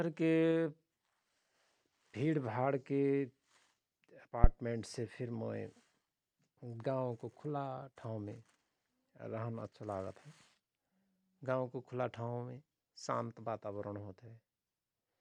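A deep, dull thump cuts through the speech from 4.44 to 4.51 s, peaking at about -10 dBFS and dying away within roughly 16 ms. This is a phantom power thump: a supply was switched on or off on a live input, and the voltage step passed through the coupling capacitors.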